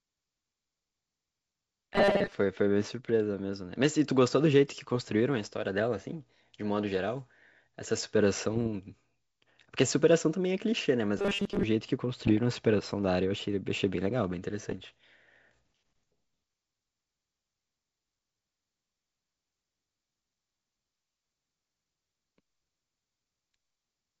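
From 1.95 to 2.32 s and again from 11.19 to 11.63 s, the speech turns into a rigid, metallic buzz at 200 Hz. This is robotic sound from repeated short buffers, likely caused by audio arriving late so that a 5 ms slice is looped while most of the real signal is skipped. On a spectrogram these stretches show evenly spaced horizontal harmonic lines locked at 200 Hz and its multiples. In the waveform they appear as an identical short cycle repeating.

Bit errors on an ADPCM link hit the G.722 wideband stream at 8.51 to 8.68 s, 12.25 to 12.38 s and 14.64 to 14.83 s, at an error rate of a fraction of a percent. Each flipped bit throws off the decoder's step size and prediction, so the error rings on briefly. The result is pops, rough crackle and quick jumps in level. On a spectrogram these bursts show as broadband vertical streaks, and the waveform has spikes and abrupt changes in amplitude.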